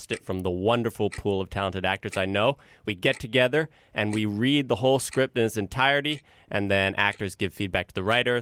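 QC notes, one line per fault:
Nothing to flag on this speech recording; every listen came up empty.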